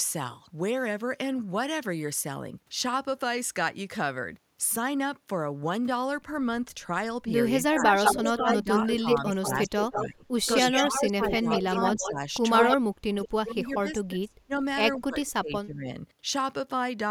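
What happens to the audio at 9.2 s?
At 9.2 s the speech is being turned down in pieces. This is speech suppressed in double talk, running from 7.59 to 15.9 s. With both sides talking, the echo canceller likely could not tell the talker from loudspeaker echo. It cut both, by up to about 30 dB.

An echo leak runs over the same moment, from 7.76 to 13.29 s. A copy of the speech returns 175 ms late, only a little quieter than the original. The loudspeaker side's echo canceller likely left some of its loudspeaker pickup in the signal it sent back.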